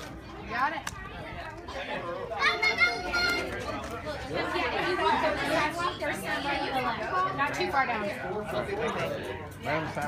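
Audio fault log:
8.87 to 8.91 s, corrupt frame decoded. A brief squeaky burst lasting 40 ms, about two frames' worth, sits at a fairly low level near -30 dBFS. Damaged bits made the decoder place energy at wrong frequencies, so it sounds like a chirp.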